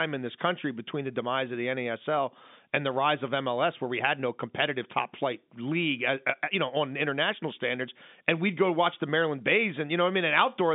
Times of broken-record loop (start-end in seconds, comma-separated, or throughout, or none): none